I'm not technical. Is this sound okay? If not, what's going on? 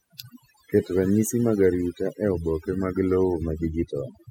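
No. This speech clip has overdone noise removal, running the whole way through, about 4 seconds. A cleanup tool was pushed too hard: it switched off parts of the sound it mistook for background noise, taking the quieter parts of the voice with them. You can hear it in the background, which drops and breaks up into twinkling, warbling specks. Ordinary hiss would be a steady, even rush rather than these scattered sparkles.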